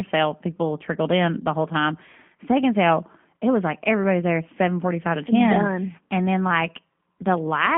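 G.729 codec damage runs through the entire clip. Each short frame of speech is rebuilt from a vocal tract model, pitch prediction and a few pulses, which fits an 8 kbit/s VoIP link. Only 150 Hz to 3.4 kHz remains, and the voice sounds plainly rough, buzzy and synthetic.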